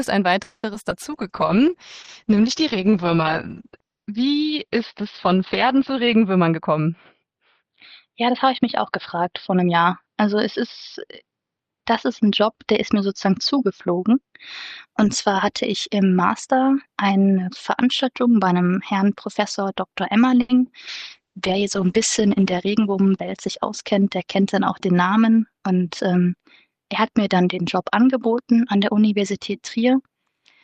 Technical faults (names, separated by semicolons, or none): call audio freeze; short concealed packet loss; call bitrate drop; jitter buffer speed-up; short stall from a late packet